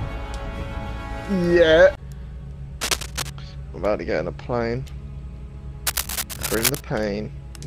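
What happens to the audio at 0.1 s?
Nothing goes wrong at 0.1 s; the audio plays through that moment intact, with no dropout, click, distortion or other fault.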